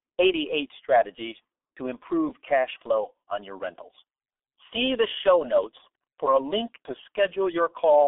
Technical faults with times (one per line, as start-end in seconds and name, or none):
0.00-8.08 G.723.1 codec